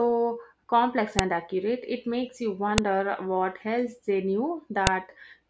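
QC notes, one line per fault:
1.19 s, 2.78 s and 4.87 s: file header played as audio. You get a sharp, loud snap at each of these points, where separate WAV pieces were joined without removing their headers. Those few dozen header bytes play back as raw samples, so they land as a hard click regardless of what the speech is doing.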